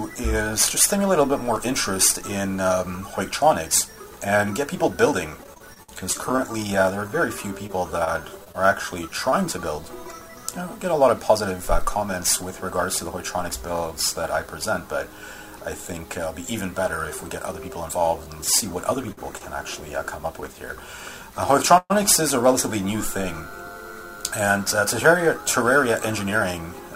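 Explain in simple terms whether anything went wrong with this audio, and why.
Yes, four things went wrong, all typical of audio sent over a network connection.

From 5.43 to 9.34 s there is repeated packet loss (robotic sound). Seventeen small holes appeared in quick succession, the longest 57 ms. Each was patched by stretching the sound just before it, and about 0.22 s of audio is gone. The holes come so close together that the sound turns choppy and machine-like.

Between 19.12 and 20.44 s there are scattered short gaps: about three isolated holes, the longest around 50 ms, each filled by continuing the sound before it. Unlike the stretch at 5.43 s, they are spread out, so the audio stays clear between them.

At 21.78 to 21.92 s comes a call audio freeze. For 122 ms the sound hangs, ending in about 50 ms of silence, then carries on where it stopped with nothing lost. It was likely caused by packets held up on the way. 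Unlike the gaps, this adds a pause instead of removing audio.

From 24.81 to 26.90 s there is a jitter buffer speed-up. The receiver trimmed about 50 ms of tiny pieces to catch up, so the sound runs at 102% speed at the same pitch. That is a small enough change that it may not sound rushed.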